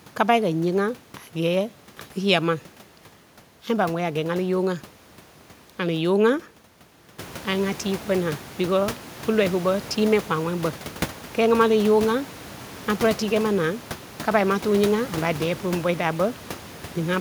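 No technical faults can be heard in this speech; the room's background noise rises by about 12 dB at roughly 7 s but stays about 17 dB below the speech.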